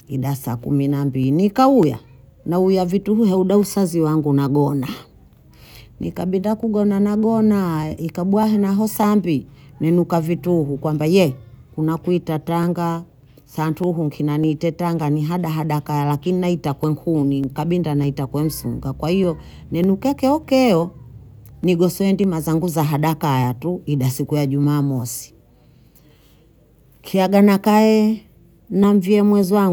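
From about 0.63 s to 29.44 s, a click or pop recurs every 0.6 s under the speech, some fifty of them in all, steady as a metronome. These are clock drift buffer slips, likely caused by two devices running on independent clocks that disagree by several hundred parts per million. The buffer between them gradually fills or drains until a short block of about 15 samples is dropped or repeated, producing each tick.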